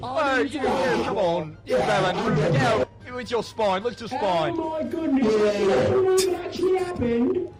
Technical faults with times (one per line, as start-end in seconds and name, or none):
2.83-2.91 skip ahead
3.44-3.77 jitter buffer speed-up